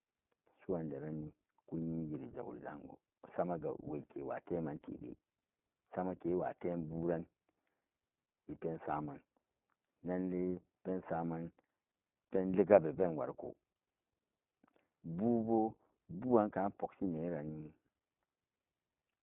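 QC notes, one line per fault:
throughout iLBC codec: speech held to 150 Hz–3.4 kHz, roughened and synthetic from independently coded 20 ms frames, unlike plain band-limiting; fits 15.2 kbps mode.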